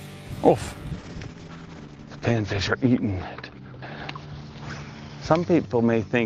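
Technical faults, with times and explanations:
0.95 s to end, call bitrate drop: bandwidth estimate collapsed, starving the encoder, which fits roughly 64 falling to 9 kbps; coarse, watery sound, muffled as the 20 kHz ceiling drops to 8 kHz.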